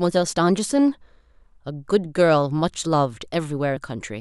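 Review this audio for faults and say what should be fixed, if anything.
At 3.76 s the speech jumps ahead by about a tenth of a second. That's compressed frames skipped: a few 26.1 ms frames went missing or were rejected as damaged. To prevent it, check file integrity after transfer and re-encode from the source if frames are corrupt.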